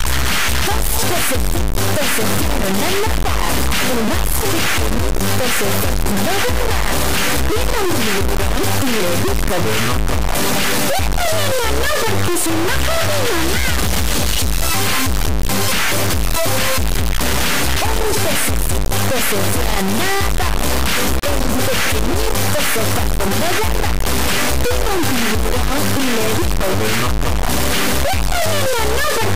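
Throughout the clip, 32-bit integer samples are being read as 32-bit float, the classic integer read as float fault. The reinterpreted bit patterns land near zero or far past full scale, so the audio becomes a harsh, extremely loud square-wave buzz slammed between silence and clipping, dropping out in the quietest moments.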